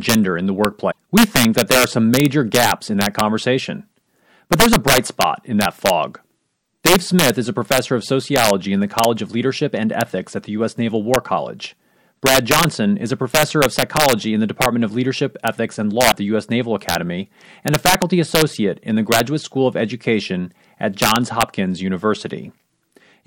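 Violent, sharp cracks break out on the loudest speech peaks throughout. This is integer overflow: with the level pushed about 7 dB too hot, the few samples past the limit wrap to the opposite sign instead of being clipped. A brief glitch follows "gender in the" at 0.88–0.96 s, with another blip at 16.08–16.14 s. Both come from damaged data in the compressed stream, where the decoder misreads frames and searches for the next frame header to resynchronise.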